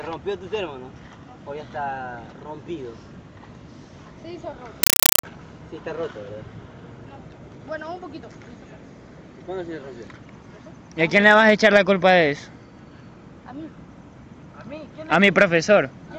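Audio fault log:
4.83–5.23 s, compressed stream played as audio: the sound is replaced by harsh, very loud chattering static, about 0.4 s long. A Dolby Digital (AC-3) stream appears to have reached the output undecoded, with its coded bytes treated as ordinary samples. Each frame plays as a 5.33 ms burst of noise followed by zero padding, repeating at 31.25 per second, which produces the rapid rattling texture. The burst density fits a 256 kbps stream.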